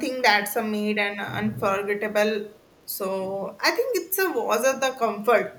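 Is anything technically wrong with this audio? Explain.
Yes. From 2.52 to 2.83 s there is an echo leak. A delayed copy of the speech returns about 212 ms after the original. It sits very low, roughly 35 dB under the direct speech, so it comes across as a faint trailing ghost. The likely cause is a far-end loudspeaker whose sound reached its microphone. That end's echo canceller did not fully remove it, so a residue was sent back into the call.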